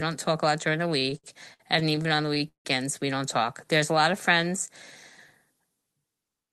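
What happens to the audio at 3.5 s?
At 3.5 s the speech is inside a jitter buffer slow-down running from 3.39 to 4.71 s. The receiver repeats single pitch periods to rebuild its reserve, adding 75 ms, so delivery drops to 95% speed at unchanged pitch, with drawn-out sounds.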